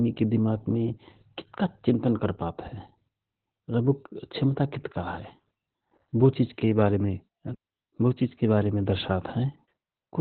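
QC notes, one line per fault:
Throughout: Opus voice compression. The speech sounds muffled and boxy, with a hoarse, slightly robotic edge and a coarse, gritty texture under each syllable. The codec is working in its linear-prediction voice mode at narrowband, so the band is cut to about 4 kHz and the consonants lose their crispness. The excitation is coded very coarsely, and the heavy damage fits a bitrate around 8 kbps.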